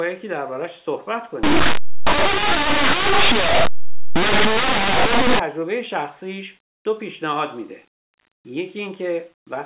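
From 1.43 to 5.39 s, plain linear 8-bit samples are decoded as mu-law codes, a case of linear audio read as companded. Values just to one side of zero expand into near-maximum outputs, so the speech becomes very loud, harsh distortion.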